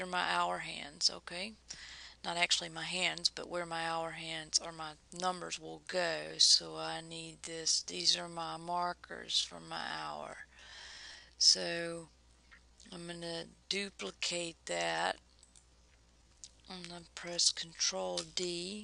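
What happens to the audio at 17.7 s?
At 17.7 s the audio is inside a time-stretched section that runs from 5.57 s to the end of the clip. Playback here moves at about 0.67 times the original pace, yet the pitch holds where it was. The dragging pace likely comes from software lengthening the audio by repeating short slices of it. That steady pitch is what separates it from a simple slowdown, such as a wrong playback rate, which would also drag the pitch downward.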